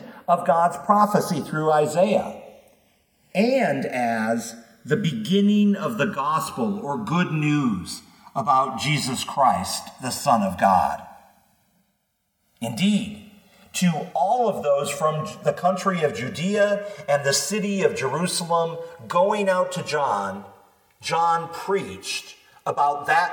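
Channels drifting apart runs through the whole clip, from the start to the end. The left and right channels appear to come from two devices on separate clocks that disagree by around 100 parts per million. The delay between them creeps steadily and reaches roughly 3 ms by the close. When the channels are summed to mono, comb-filter notches glide slowly across the spectrum, giving the sound a gradual, sweeping flange.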